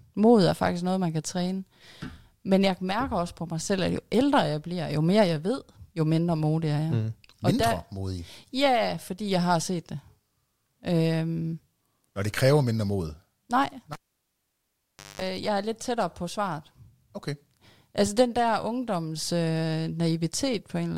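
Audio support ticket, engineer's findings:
Cable pulled and plugged in, 13.93 to 15.22 s. Pop on disconnect, then about 1.24 s of near silence. A 0.2 s burst of 50 Hz mains buzz while only the plug tip touches, then a second pop as the signal returns. Probable component: live input cable or jack.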